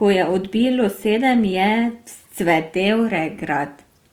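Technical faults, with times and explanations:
Throughout: Opus compression. The speech takes on a rough, grainy texture, with tonal parts of the sound turning noisy rather than clean, which is likely from an Opus encoder in its CELT music mode at a rate that fits about 24 kbps. Starved bands are refilled with folded or noise content instead of being left empty, so there is less of the watery swirl of MP3. Bandwidth stays full, reaching 20.2 kHz, without the muffled, hoarse sound of Opus's speech mode.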